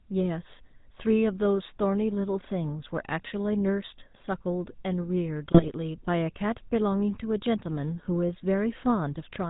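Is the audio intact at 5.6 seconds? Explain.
No. From 5.51 to 5.72 s there are GSM bit errors: corrupted filter, pitch and gain values garble the decoded frames, so the speech squawks, pops and gargles. Throughout the clip, the GSM full-rate codec's pulse-driven vocal-tract model gives a buzzy, gravelly roughness, consistent with the 13 kbps full-rate coder, with nothing above 4 kHz.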